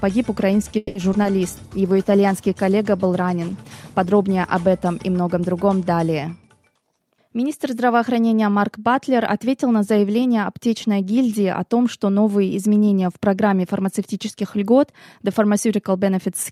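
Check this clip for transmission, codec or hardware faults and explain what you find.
Four kinds of transmission fault occur, all in the first eight seconds.

Call audio freeze, 0.77 to 0.97 s: delayed packets likely let the jitter buffer run dry, so the receiver stretched the last sound for about 180 ms as a fading buzz or hiss. The audio then resumes where it stopped, nothing lost, now running 180 ms later.

Short concealed packet loss, 1.13 to 1.16 s and 1.22 to 1.32 s: each time, about 20 ms of audio never reached the decoder. The gap was filled by extrapolating the preceding sound and crossfading back, heard as a brief smear or wobble. The second adds a little extra time.

Call bitrate drop, 1.64 to 6.06 s: a falling bandwidth estimate pushed the Opus encoder from 64 kbps down to 19 kbps, bottoming out for about 2.4 s. The coarser coding and trimmed top end make the sound rough, watery or muffled until it recovers.

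Jitter buffer speed-up, 6.43 to 7.70 s: with surplus audio queued, the receiver repeatedly cut out pitch-period slices, roughly a fifth of a second in total. Playback runs at about 114% speed with the pitch unchanged, so this stretch sounds hurried.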